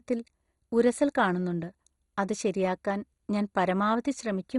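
Throughout the speech, nothing is heard above about 11.2 kHz. The sound is dull, gurgling and granular, with upper bands flickering in and out. This is likely MP2 compression, starved of bits, which fits a low rate around 56 kbps.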